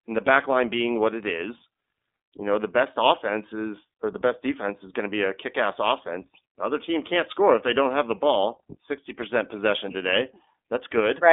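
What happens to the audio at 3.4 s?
At 3.4 s the speech sounds thin and boxy, with a rough, synthetic edge. Nothing comes through below about 250 Hz or above about 3.6 kHz. This is iLBC codec damage, and it runs through the whole clip rather than starting at that moment. iLBC codes each 20 ms frame's excitation independently of the frame before, and that frame-by-frame coarseness is plainly audible. The texture fits iLBC's 15.2 kbps mode.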